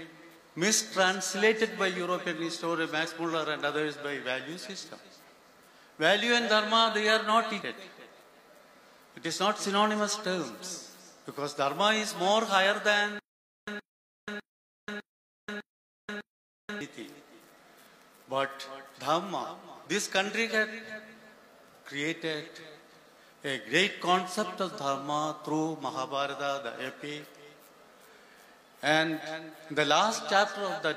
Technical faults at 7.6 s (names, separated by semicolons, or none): damaged data in a compressed stream